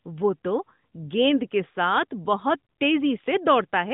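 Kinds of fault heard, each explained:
No faults can be heard anywhere in this speech clip.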